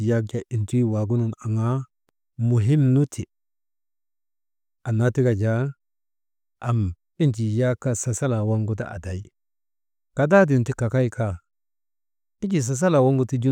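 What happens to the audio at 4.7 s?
At 4.7 s the speech continues cleanly, with no dropout, click, distortion or other fault at that moment.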